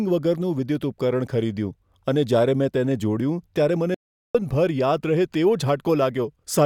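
At 3.95 s the speech cuts off mid-flow in an audio dropout to silence, returning at 4.35 s after 0.40 s. The input was likely lost while recording continued, writing silence. Unlike a natural pause, the gap carries no room tone whatsoever.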